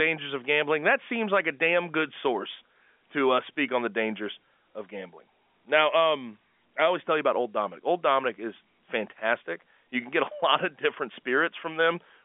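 No technical faults can be heard in this speech. It carries the narrow sound of a G.711 telephone line, with the band running from about 200 Hz to 3.5 kHz and nothing above 3.7 kHz.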